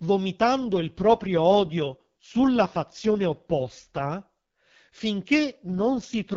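Speech whose wideband HD Voice sound turns rough and synthetic from 0.61 to 4.10 s and again from 5.64 s to the end: an AMR rate drop, fitting a fall from 12.65 to 6.6 kbit/s, with the band intact and no gap.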